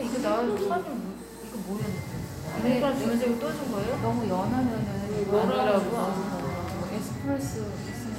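Nothing in these everyday sounds stands out as a technical fault; it's all just the sounds themselves, with nothing going wrong along the way.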